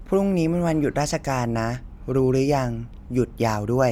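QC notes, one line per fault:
No faults heard in this speech recording.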